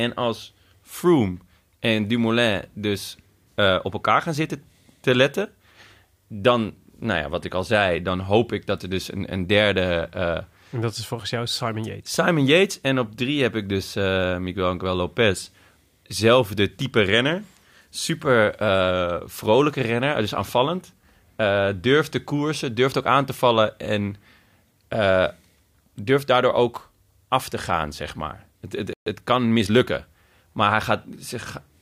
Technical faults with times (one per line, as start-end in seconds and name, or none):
28.93-29.06 playback stall
29.06-29.92 time-compressed catch-up